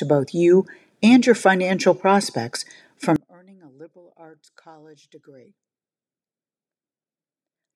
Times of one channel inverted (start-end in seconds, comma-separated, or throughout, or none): 3.16-7.75